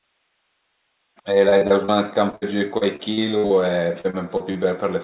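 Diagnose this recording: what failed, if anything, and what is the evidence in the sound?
Repeated packet loss (robotic sound) at 1.49–1.91, 2.30–3.53 and 4.01–4.58 s. Lost network packets left gaps of up to 60 ms, filled by extending earlier sound, so the speech turns choppy.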